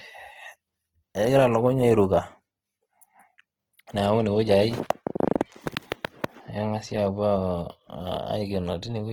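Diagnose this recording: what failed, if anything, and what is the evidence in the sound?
The damage sits at the codec stage, and the likely cause is Opus compression in its music-style mode at a low rate, around 16 kbps. Throughout, the speech is plainly grainy and rough, with tonal parts turned noisy. A spectrogram shows bands filled with noisy texture rather than holes, reaching about 20.4 kHz.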